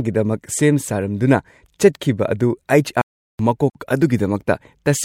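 At 3.01 s the speech cuts to silence in mid-flow and stays silent for about 0.38 s, resuming at 3.39 s. This is a playback stall, likely the player running short of data or its thread being briefly blocked.

At 3.70 s a short hole of about 51 ms opens in the continuous speech, with smeared edges, and the speech then carries on from where it stopped. This gap at a join of encoded pieces comes from separately encoded chunks, here about 6 s long, being joined without trimming their start delay and end padding.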